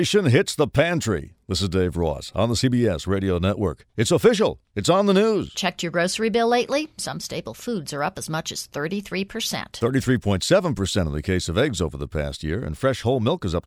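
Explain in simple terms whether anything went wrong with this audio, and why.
Nothing went wrong on the technical side of this speech recording; the signal holds steady the whole way, with no problems to point to at any moment.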